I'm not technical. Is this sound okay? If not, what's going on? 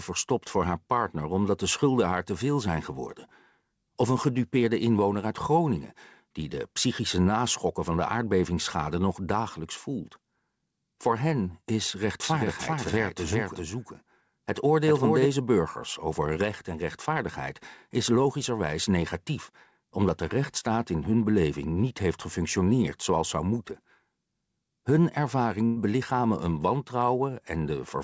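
No, there are three problems. From 12.24 to 15.26 s there's a doubled audio track: a quieter copy trails about 0.4 seconds behind, likely picked up twice through a slower path. At 16.34 to 16.38 s, a short concealed packet loss leaves a tiny smear or wobble where the call patched over a missing scrap. At 25.66 to 25.78 s, a burst of packet loss swaps about a tenth of a second for a fading fill, then the audio jumps ahead.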